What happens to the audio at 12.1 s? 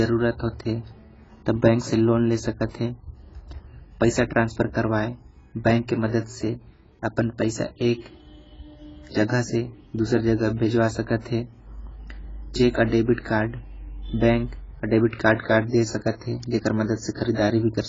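At 12.1 s the speech sounds dull, smeared and watery, with a warbling, fizzy texture on sustained sounds and sibilants and nothing above about 7.6 kHz. This runs through the whole clip. The likely cause is heavy AAC compression. The encoder quantised each frame's frequency lines coarsely, leaving gaps and substitute noise in the spectrum and lowering the cut-off. That points to AAC-LC at a very low bitrate, around 16 kbps.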